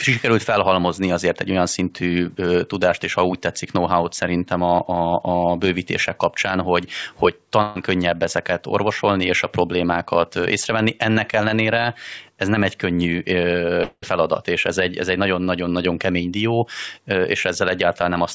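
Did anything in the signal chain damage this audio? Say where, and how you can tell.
Yes. A burst of packet loss at the network stage, 7.62 to 7.77 s, right after "bővítések kapcsán hogy hogy": the last sound is stretched and faded out for about 134 ms, then speech resumes at "könnyebb ezeket orvosolni és" with roughly 140 ms skipped.

A long network dropout is the likely cause at 13.83 to 14.04 s. The receiver extends the final sound for about 190 ms as it fades, leaving about 50 ms of silence before "feladat és ez egy" arrives, with about 200 ms of audio missing. The band stops at 8 kHz, which fits a G.722 call path at 64 kbps.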